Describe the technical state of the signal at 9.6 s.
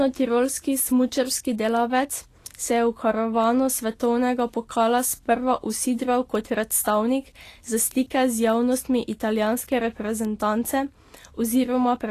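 At 9.6 s the audio is likely passing through low-bitrate Vorbis compression, with nothing above 14.2 kHz and the treble quantised so coarsely it turns to noise. The damage is plainly audible as hiss, graininess and softened attacks, which fits a rate of around 37 kbps.

Word clock ticks also run across this moment, spanning 0.13 to 11.81 s. A receiver running on its own clock, drifting around 30 ppm from the sender's, drops or repeats one sample each time the clocks slip, giving sharp ticks of uneven strength roughly every 0.7 s.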